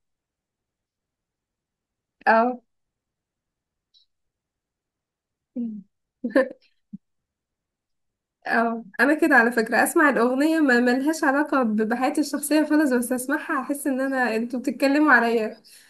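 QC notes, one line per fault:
No technical faults can be heard anywhere in the speech recording; the signal holds steady with nothing breaking into it.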